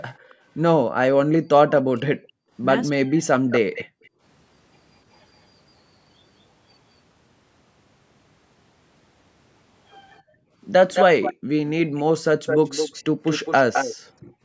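Right at the start, from 0.14 to 0.35 s, there's a very faint echo leak, a copy of the speech trailing by 272 ms. That's most likely the far end on a loudspeaker, with its echo canceller letting a scrap of what its mic heard slip back down the line. Overlapping that, from 0.25 to 0.36 s, the background is gated by the echo canceller: the room tone dips by about 15 dB for a brief moment while the canceller clamps the mic, then comes back.

From 1.43 to 3.43 s the speech gets suppressed in double talk. Across roughly a second in total, the voice dips hard, as much as about 40 dB, and drops out in patches. That's likely the canceller hearing both sides at once, failing to tell the talker from the loudspeaker echo, and turning everything down.

At 3.5 to 4.09 s the echo leak returns, now delayed 213 ms and much louder, around 10 dB under the speech. From 3.85 to 4.21 s the background is gated again, for roughly 300 ms and by about 40 dB. 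The longest stretch runs from 10.14 to 13.96 s, where the 213 ms echo sits only about 5 dB below the speech. That makes it a clear, doubled-up second copy. The background is also gated from 10.22 to 11.49 s, dropping about 40 dB over roughly half a second in total. One last short gate hits at 14.23 to 14.42 s, a dip of about 24 dB.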